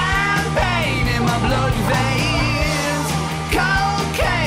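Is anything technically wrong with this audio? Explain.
No, nothing technically wrong can be heard here.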